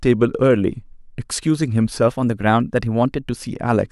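From 2.07 to 3.29 s the speech suddenly runs about 6.3% fast and sits roughly a semitone sharp (105 cents), then snaps back to normal. That's likely a drift correction step, where clock-matching software bumped the playback rate in one jump to rebalance its buffer.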